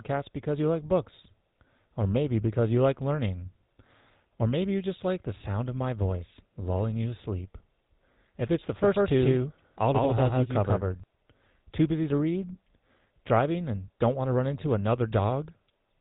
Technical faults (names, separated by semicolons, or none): GSM full-rate codec; doubled audio track